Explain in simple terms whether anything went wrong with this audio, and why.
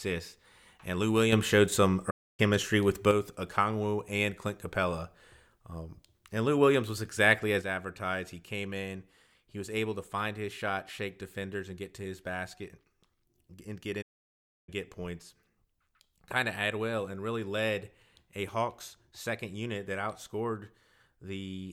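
Two kinds of fault can be heard in this speech.

The first is a sudden gain jump. At 1.32 s the level leaps up, and it drops back at 3.11 s. From 7.62 s to the end, it falls to quieter. The likely cause is a volume setting applied instantly, without a gradual fade.

The second is a playback stall. The sound cuts to silence at 2.10 s for about 0.28 s, and again at 14.01 s for about 0.66 s. Then it carries on. The player likely ran short of data and had to wait.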